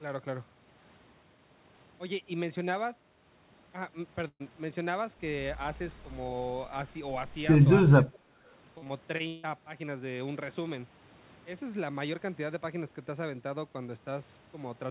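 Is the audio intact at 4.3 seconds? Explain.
No. A burst of packet loss runs from 4.28 to 4.42 s. The receiver stretched the preceding sound over about 120 ms of missing audio, fading it into roughly 50 ms of silence. On a spectrogram this shows as smeared, decaying energy, then a blank strip before the speech resumes abruptly.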